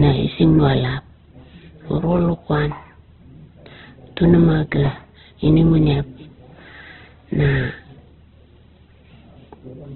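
Speech clip that sounds narrow and grainy all the way through, with nothing above about 4.1 kHz, likely heavy Opus compression at a very low bitrate.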